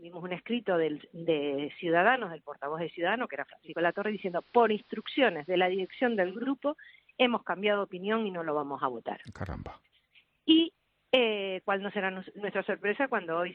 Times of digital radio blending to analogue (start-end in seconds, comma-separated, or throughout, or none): 3.63-6.50